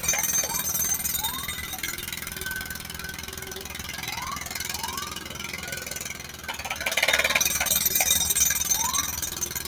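A noise suppressor applied to music or sounds runs throughout this recording of non-speech sounds. Processing built for speech treats steady tones, ambience and decaying tails as noise, so the level swings by around 10 dB as material is pushed down and released. Sound cut by the noise suppressor occurs from 2.78 to 3.72 s, where most of that stretch dips by up to about 5 dB, and again from 6.14 to 6.46 s, dropping by about 6 dB. In both spots, sound was mistaken for noise and attenuated more heavily than its surroundings.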